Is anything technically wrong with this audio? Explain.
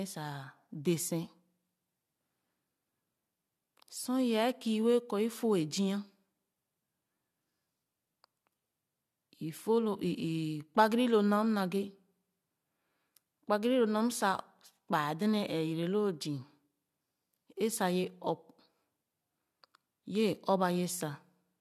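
No, nothing is technically wrong with this audio.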